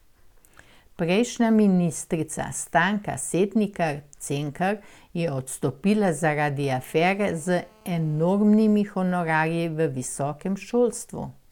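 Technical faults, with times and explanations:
6.59–8.26 s, GSM phone buzz: right after "je odstopila" a hard, raspy buzz at 217 Hz with dense harmonics sits about 32 dB below the speech. A nearby 2G handset on a call sends radio bursts 217 times a second, and the audio circuitry rectifies them. The buzz holds steady, unlike the smooth, lower 50 or 60 Hz tone of mains hum.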